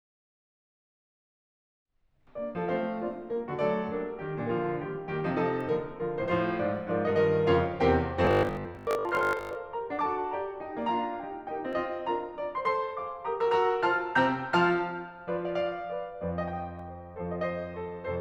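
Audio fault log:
8.25 to 9.55 s, robotic sound from repeated short buffers: The music turns into a rigid, metallic buzz at 50 Hz for about 1.3 seconds. The buzz sits at one fixed pitch while the music underneath still moves roughly as before. A 50 Hz buzz matches a 20 ms stretch played again and again. The likely cause is new audio arriving too late, so playback repeats the last short buffer for most of this stretch and the real audio in between is skipped.
11.73 s and 16.79 s, dropped samples: Each time, a single sharp click cuts through the music and is gone at once. No sound goes missing that the ear can follow. The loss at each point is a fraction of a millisecond. That is likely just a few samples missing from the stream, so the waveform jumps straight from one value to a later one. That sudden step is what produces the click, which would show as a thin vertical line across the spectrum.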